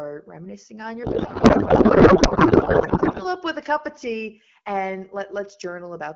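A codec payload misread runs from 1.03 to 3.25 s in this speech clip. Octet-aligned AMR frames are unpacked as bandwidth-efficient, so fields land in the wrong bits and the AMR-WB decoder turns the speech into garbled noise and warble that barely follows it.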